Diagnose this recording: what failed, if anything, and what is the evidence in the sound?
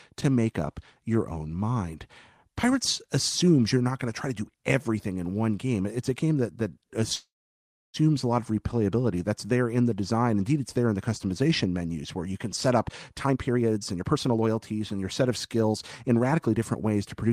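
Network packets were likely delayed and the jitter buffer ran dry, causing a call audio freeze from 7.15 to 7.97 s. After "a game that that", a fading buzz or hiss leads into about 0.66 s of silence. Then "a lot of replayability" resumes intact, with nothing lost and a 0.78 s gap inserted.

The jitter buffer later held surplus audio and cut it back with a jitter buffer speed-up. From 12.89 to 17.30 s, starting after "you can set up", short pitch-period slices are removed repeatedly. The speech runs at 117% speed with unchanged pitch and sounds hurried, shedding roughly 0.7 s.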